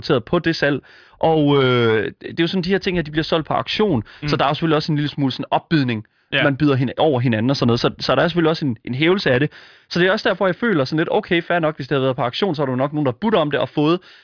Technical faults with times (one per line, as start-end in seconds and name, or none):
none